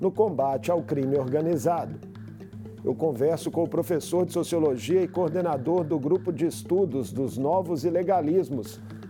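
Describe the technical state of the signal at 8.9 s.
Nothing is wrong with the signal at 8.9 s; the audio is intact at that point.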